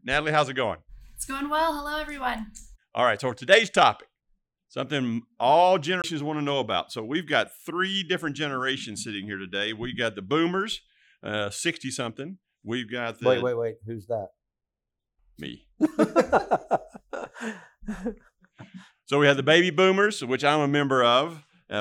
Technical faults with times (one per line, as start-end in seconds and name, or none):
6.02 CD skip